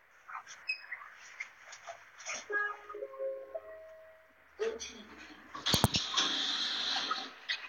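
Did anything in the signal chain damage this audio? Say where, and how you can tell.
No, nothing damaged this audio.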